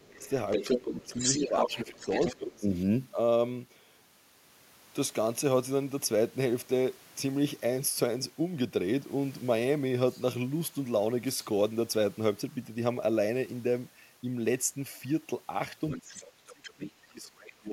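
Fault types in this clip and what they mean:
Speech suppressed in double talk: the echo canceller likely could not separate the two overlapping talkers, so the speech dips by up to about 25 dB near the start and end.
Other side's voice leaking through: the echo canceller likely left loudspeaker echo in the microphone signal, so a second voice comes through early, about 5 dB under the speech, and fainter near the end.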